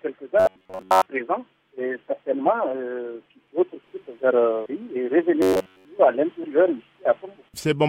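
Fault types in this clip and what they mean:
Robotic sound from repeated short buffers: in two brief spans the sound turns into a rigid metallic buzz at 93.8 Hz, likely from a 10.7 ms slice replayed repeatedly while most real audio is skipped. Unlike steady mains hum, it exists only in those spans.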